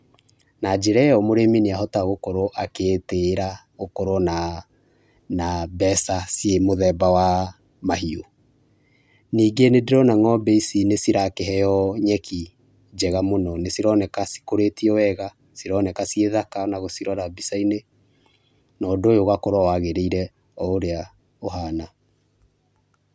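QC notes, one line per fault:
No faults found in this speech recording. Nothing calls for a note at any point in the clip.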